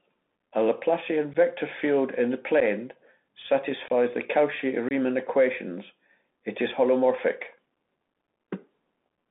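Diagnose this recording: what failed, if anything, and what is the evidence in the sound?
The codec stage failed: the speech has passed through a Bluetooth CVSD headset codec, and the damage is plainly audible. The band runs only from about 200 Hz to 3.6 kHz, and a granular hiss sits under the speech throughout. The sibilants are scratchy, and loud high-frequency content distorts. CVSD sends one bit per sample to step the waveform up or down. Its adaptive step cannot keep pace with fast transients, which fits a 64 kbps narrowband headset link.

The wireless link to the headset shows unconcealed Bluetooth headset packet loss at four points, each a short hole with abrupt edges. The first runs from 1.34 to 1.36 s, about 11 ms just before "field in the". The second runs from 2.60 to 2.62 s, also about 11 ms, just after "field in the". The third runs from 3.88 to 3.90 s and lasts about 19 ms. 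The fourth runs from 4.89 to 4.92 s, about 23 ms just before "equations it is holomorphic". Nothing fills these gaps, and their lengths fit roughly three to seven lost packets each.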